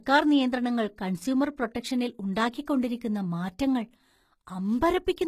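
HE-AAC compression, running through the whole speech clip: the treble is bright but synthetic, with s sounds turning gritty and metallic and nothing above 14.9 kHz. The likely cause is spectral band replication copying lower bands upward, consistent with a low bitrate around 20 kbps.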